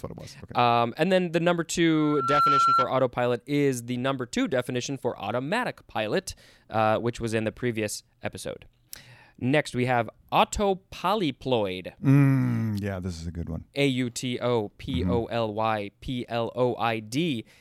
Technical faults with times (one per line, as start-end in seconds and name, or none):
1.91-2.94 loudspeaker feedback squeal